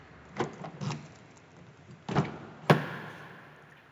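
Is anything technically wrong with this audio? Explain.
Yes. From 2.68 s to the end of the clip there is imaging from linear upsampling, which fits a rate conversion from 16 kHz to 48 kHz done by straight-line interpolation. That weak filter dulls the top of the original band and leaves a faint mirrored copy of the spectrum between 8 kHz and 16 kHz, roughly 35 dB below the sound, heard as a light metallic shimmer on bright content. Unlike aliasing, the extra energy mirrors the spectrum upward rather than folding downward.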